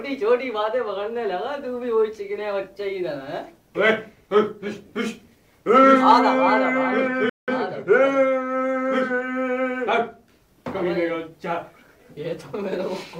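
At 7.29 s the player most likely ran short of data or had its thread held up, producing a playback stall: the output drops to silence for about 184 ms, until 7.48 s, cutting the sound off mid-flow before it picks up again.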